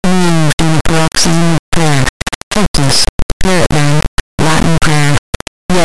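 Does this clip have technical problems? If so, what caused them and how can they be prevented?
Yes. The speech is hit by an integer read as float fault for its whole length: samples written as 32-bit integers were read back as 32-bit floats. The resulting values sit near zero or far beyond full scale, so the output slams between silence and the clipping limit. It is heard as an extremely loud, buzzing square wave that drops out in the quietest passages. Prevention: carry the sample format through the whole chain and check that the reader's declared format matches what the writer produced, converting explicitly between integer and float.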